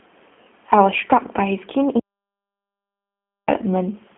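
A short speech recording that's gone through the G.729 codec the whole way, and you can really hear it: everything sits in a telephone band of roughly 200 Hz to 3.4 kHz with nothing above 3.6 kHz, and the voice has that rough, slightly synthetic edge from being rebuilt out of a vocal-tract filter, a pitch predictor and a few pulses per frame, which fits an 8 kbit/s G.729A stream. On top of that there's an audio dropout to silence from 1.99 s to 3.48 s, so about 1.48 s of silence with no room tone. The sound cuts off mid-flow and comes back just as abruptly, most likely because the input was lost and the encoder kept writing silence.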